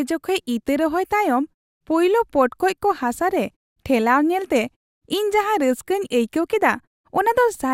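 Nothing in this speech recording stands out as a technical fault; there are no dropouts, glitches or distortion to point to anywhere along the way.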